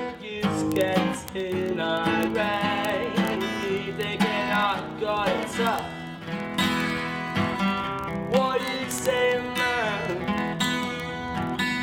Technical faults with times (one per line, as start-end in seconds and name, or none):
0.10-11.82 word clock ticks